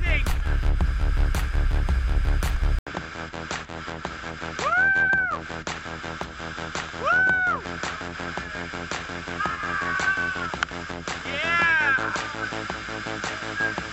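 At 2.79 s the input was likely switched to a poorer device. After a silence of 80 ms, the audio loses everything above 7.7 kHz, turning duller and boxier, drops a few decibels in level, and carries a faint new background noise to the end.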